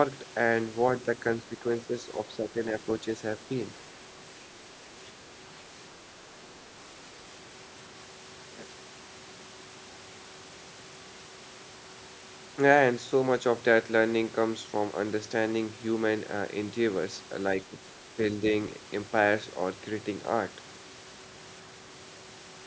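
Brief dips in the speech level occur at 1.44–1.53 s, 1.85–1.93 s, 2.37–2.57 s and 17.67–17.73 s. Each drop is shallow, about 5 dB at most, and lasts roughly 70 to 150 ms, likely speech suppressed in double talk, with the echo canceller ducking the near talker while the far side spoke. On the waveform the envelope pinches inward briefly; on a spectrogram the energy fades in short vertical bands.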